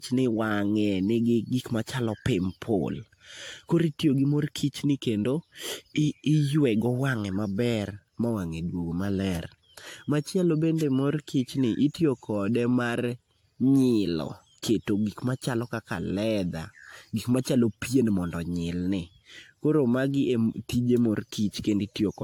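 Speech with generation loss throughout: the sound is swirly, smeared and hollow, attacks are blurred, and nothing remains above 18.8 kHz. This fits AAC-LC at around 96 kbit/s, likely re-encoded around seven times, each pass requantising on a shifted frame grid.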